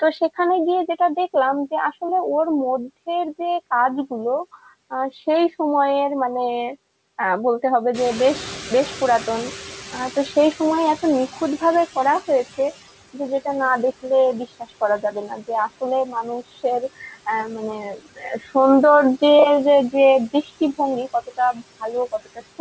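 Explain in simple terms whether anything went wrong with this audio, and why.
Several things went wrong, all caused by the noise suppressor. It leaves noise suppressor artifacts throughout: the background swells under speech and dips between phrases.

At about 8 s the room noise jumps up. The noise suppressor is catching up until 12.48 s, so the louder background comes through before it fades.

There is speech cut by the noise suppressor from 14.48 to 18.55 s, briefly at 20.33 to 20.79 s, and from 21.13 s to the end. It mistakes quiet parts of the speech for noise, so those bits sound swallowed.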